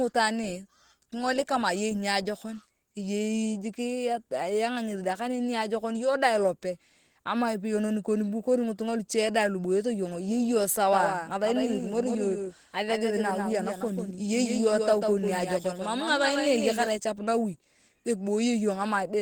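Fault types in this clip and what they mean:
Opus compression: Plainly audible codec damage throughout, which fits Opus at about 16 kbps in its hybrid speech mode, making the sound muffled and hoarse. The spectrogram reaches to about 20.1 kHz, but the bands there look grainy and noise-filled rather than cleanly harmonic.
Doubled audio track: From 10.93 to 16.89 s a second full-band copy trails the original by around 150 ms at about 5 dB lower, likely from a slower capture path or misaligned edit. The waveform shows each onset repeated, and the copy begins and ends abruptly, without decay.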